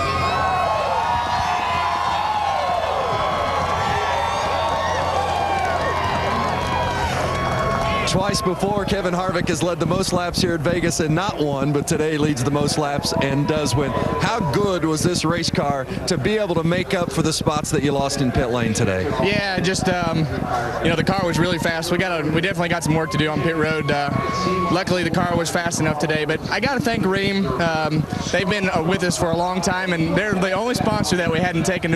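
From 8.17 s right through to 31.94 s there's a train of clicks, a few hundred of them, about 10.3 per second at an irregular pace, peaking roughly 10 dB over the sound. It's likely interference from nearby gear or a faulty connection or power supply.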